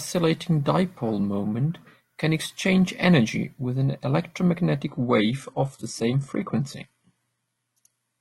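At 4.88 s the speech abruptly loses its brightness and takes on a thinner, synthetic, swirly quality that lasts to the end of the clip, with no gap at the switch. Nothing above about 11.8 kHz survives. This is an adaptive stream at a lower bitrate: the player dropped to a cheaper encoding when the connection slowed, and the sound points to a step from roughly 96 kbit/s AAC down to HE-AAC near 16 kbit/s.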